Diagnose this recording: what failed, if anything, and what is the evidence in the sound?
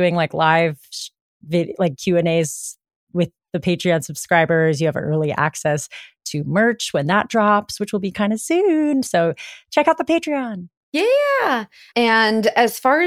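Nothing failed; no fault is audible anywhere in this recording.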